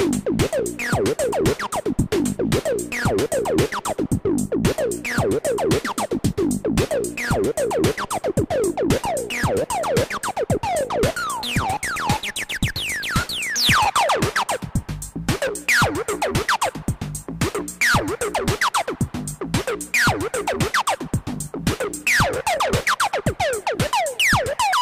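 Nothing in the audio stood out as a technical problem on listening.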